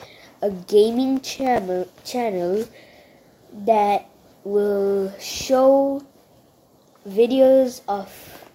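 Processor overload crackle from about 1.17 to 1.58 s: the processor repeatedly missed short buffer deadlines, replaying old audio with hard edges and producing a burst of gritty crackle.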